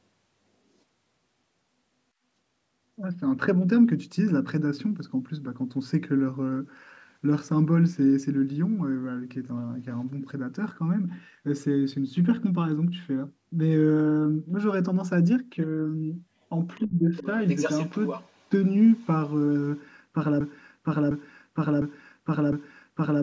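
An echo canceller that likely failed to remove the loudspeaker signal from the microphone lets the other side's voice leak through in four bursts: 16.74 to 16.78 s at about 35 dB below the speech, 17.18 to 17.26 s at about 15 dB below, 17.48 to 18.49 s at only about 10 dB below, and 18.96 to 19.07 s at about 40 dB below. Between the first two bursts, from 16.81 to 17.16 s, both sides were talking at once. The canceller likely could not separate the talker from the echo and turned everything down, so the speech is suppressed in double talk. The level sinks by as much as about 25 dB, and the dip lasts roughly 0.4 s. At 20.41 s a stalled player, encoder or stream likely kept resending its last buffered fragment, producing a broken-record loop. A 0.706 s piece of sound repeats exactly, back to back, four times until the clip ends, and the audio that belonged there is lost.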